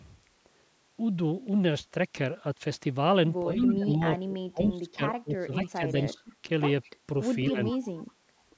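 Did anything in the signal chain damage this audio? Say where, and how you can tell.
Yes, the call processing stage. From 3.45 to 6.35 s the speech dips and breaks up, dropping by about 20 dB at worst and roughly two seconds in total, with a shorter dip of about 10 dB at 7.5 to 7.75 s. This is speech suppressed in double talk, likely because the echo canceller ducked everything while both sides talked.

There's also echo leak: a copy of the speech trailing about 207 ms behind, at 3.57 to 3.73 s, 4.65 to 4.7 s, 5.65 to 5.91 s, 6.83 to 6.9 s and 7.44 to 8.04 s, sitting about 10 to 30 dB under the speech. The steady delay points to a speakerphone's echo canceller letting some of its loudspeaker pickup through.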